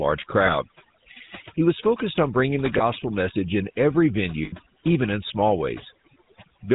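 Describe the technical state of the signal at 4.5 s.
At 4.5 s the signal sits inside a dropout of lost GSM frames, running from 4.44 to 4.53 s, between "message in every" and "even in small". For about 80 ms, which points to four missing 20 ms frames, the decoder keeps repeating the last good frame's settings. The gap is heard as a brief rough, metallic ring rather than the real sound. On a spectrogram it looks like a smeared, repeated band pattern with striped or frozen harmonics. On the waveform it is a short stretch of near-identical cycles.

Beneath this, the GSM full-rate codec shapes the whole clip, and its damage is plainly audible. Its buzzy, gravelly character fits the 13 kbps full-rate coder. It models the vocal tract with a short filter and drives it with a coarse, regularly spaced pulse excitation, so harmonics come out grainy. On a spectrogram everything above 4 kHz is empty, with a hard ceiling, and the harmonic stripes below it look rough and uneven.

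Overdone noise removal is also present at this moment. The noise reducer pulls individual frequency bands far down whenever they approach its noise estimate, and weak parts of the speech go with them. The background drops and breaks up into twinkling specks. On a spectrogram the background shows as black gaps scattered with isolated bright dots. Fine detail between the harmonics is carved away in patches.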